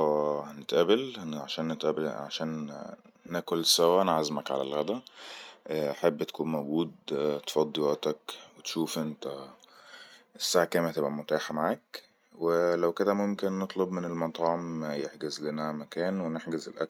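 A speech recording with nothing technically wrong with it.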